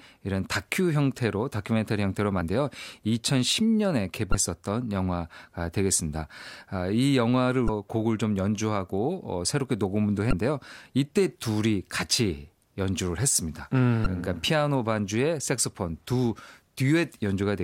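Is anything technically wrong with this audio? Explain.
Yes. The speech contains five bursts of damaged data in a compressed stream, at 2.38–2.41, 4.31–4.35, 7.66–7.69, 10.30–10.33 and 14.03–14.06 s, each about 34 ms long. At each point some of the encoded bytes are corrupt, so the decoder misreads those frames, loses sync, and hunts for the next valid frame header. Each one comes through as a short squawking chirp or blip cutting across the speech.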